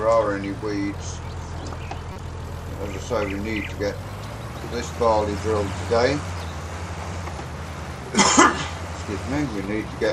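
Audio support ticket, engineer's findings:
Corrupt frame decoded, 2.13–2.20 s: short squeaky noise burst peaking around -20 dBFS. Decoder played bit-damaged frames, a few in a row, misplacing energy across wrong frequencies.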